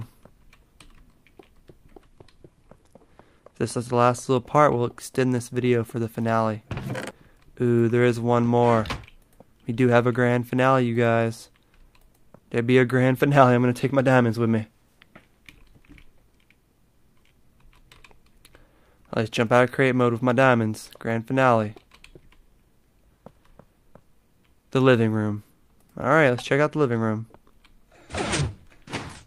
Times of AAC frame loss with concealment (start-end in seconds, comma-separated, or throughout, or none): none